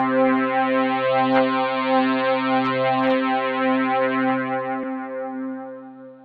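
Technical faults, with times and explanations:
4.83–4.85 s compressed frames skipped: roughly two frames, fitting a 20 ms frame length, went unplayed, so the audio jumps ahead about 40 ms.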